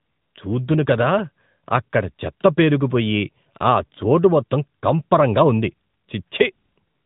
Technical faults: AMR narrowband mobile codec

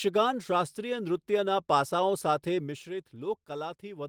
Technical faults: none

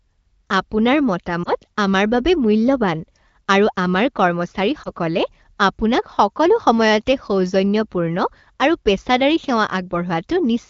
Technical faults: lost AMR speech frames

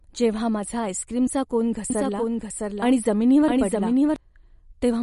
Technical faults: MP3 compression; doubled audio track

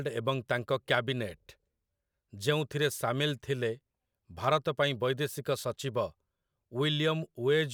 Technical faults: none

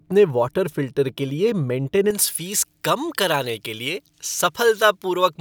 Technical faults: pre-emphasis left on

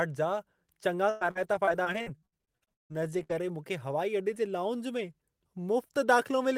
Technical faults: repeated packet loss (robotic sound)

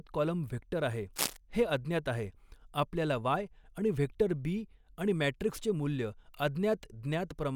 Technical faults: cable scratch noise

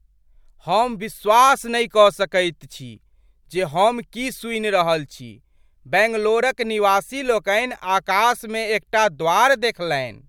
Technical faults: none

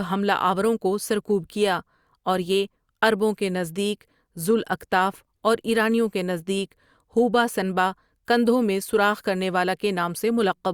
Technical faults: none

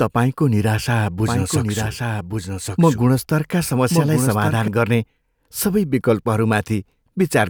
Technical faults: doubled audio track

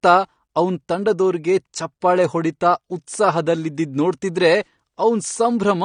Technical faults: AAC compression

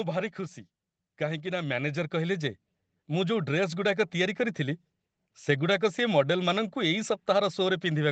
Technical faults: automatic gain rising

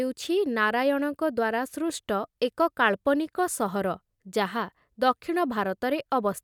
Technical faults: none

